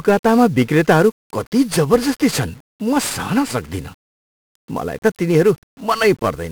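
A speech recording passed through 1-bit DFPWM compression from start to finish, storing a single bit per sample to nudge an adaptive level up or down, at a rate that fits roughly 48 kbps. The heavy quantisation noise leaves everything fuzzy and crackling, with treble sunk in hiss.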